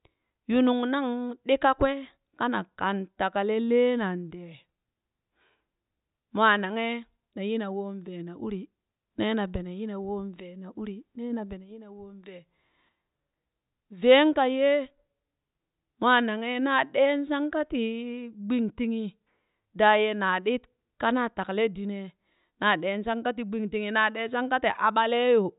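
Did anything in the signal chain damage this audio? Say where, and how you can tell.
No, nothing in the signal chain has left audible damage on this speech recording. No stage, from the input wiring through to playback, leaves a mark that can be heard anywhere in it.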